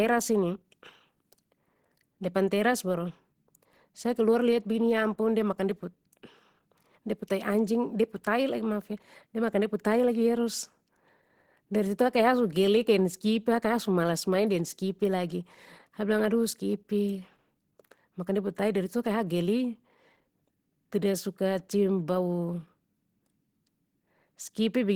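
Throughout, the speech sounds hoarse and grainy, with a plainly audible rough texture, yet it still extends up to 20.2 kHz. This is likely Opus compression in hybrid mode, which codes the lower band with a speech model and fills the top, at a rate that fits 16 kbps.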